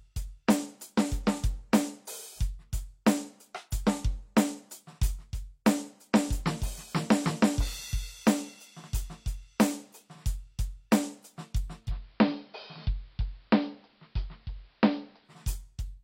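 Digital radio blending to analogue occurs from 11.78 to 15.38 s: the receiver lost the digital stream and cross-faded over 138 ms to the AM broadcast. The music picks up hiss around 35 dB down, with no change in level.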